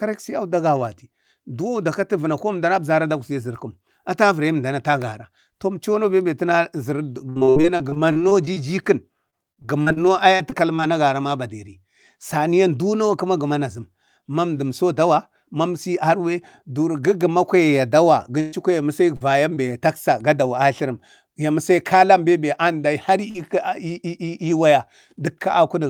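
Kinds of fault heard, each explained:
Repeated packet loss (robotic sound): from 7.29 to 8.58 s, and again from 9.30 to 10.80 s ending just before "agaran a baderi", the speech breaks into a choppy stutter. Packets kept going missing, twelve gaps in the first stretch and eight in the second, and each hole was patched by extending the last sound, filling about 27 percent and 14 percent of those spans. The longest patches run 63 ms and 40 ms.
Burst of packet loss: at 18.40 to 18.54 s roughly 120 ms of consecutive audio failed to arrive in time. The receiver stretched the last sound across the whole gap while fading it down, so that slice turns into a held buzz or decaying hiss rather than silence. The speech then picks up further along, and whatever fell inside that stretch is simply gone.
Short concealed packet loss: at 19.16, 19.54 and 23.30 s brief holes of about 40 ms, 20 ms and 40 ms appear. 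Each was covered by continuing the preceding sound, following its pitch when voiced or as shaped noise when not, then crossfading back into the real signal. These register as quick smears or wobbles, and a short consonant caught inside one can drop out.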